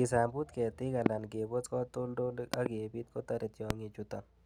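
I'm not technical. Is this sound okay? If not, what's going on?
No. There are three loud pops: sharp thumps at 1.06 to 1.08 s and 3.70 to 3.73 s, and a double pop at 2.54 to 2.68 s, with the speech carrying on underneath. They're likely brief electrical jolts, from a plug, switch or static.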